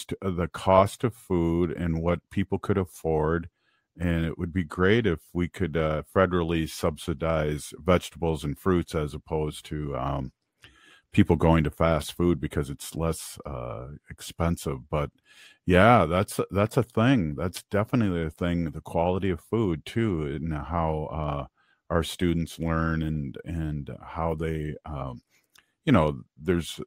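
Nothing technical goes wrong anywhere in this speech recording, so there's really nothing here to flag.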